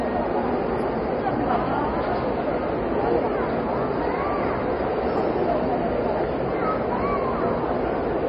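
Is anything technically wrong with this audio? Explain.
Yes. For the whole clip the audio carries heavy damage of the kind MP3 compression leaves, and that is the likely cause. Nothing is present above 11.2 kHz, a hard ceiling an encoder imposes when bits run out, consistent with a very low rate around 32 kbps. With so few bits, faint frequency lines get dropped and return from frame to frame, so the sound turns watery and swirly, edges smear, and bright content chirps metallically. That flickering swirl distinguishes it from a simple low-pass filter, which would dull the treble but stay steady.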